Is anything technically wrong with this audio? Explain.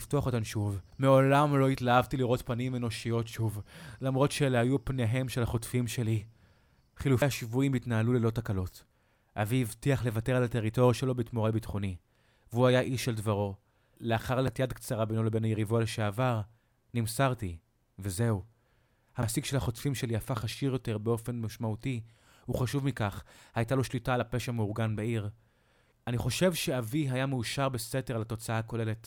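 Yes, there are three CD skips in this speech, at 7.22 s, 14.47 s and 19.22 s. At each, the laser jumped to another turn of the disc's spiral, giving a brief tick and mute of a few milliseconds before playback resumed elsewhere. Unlike a plain dropout, the sound resumes shifted by a disc turn rather than continuing where it stopped.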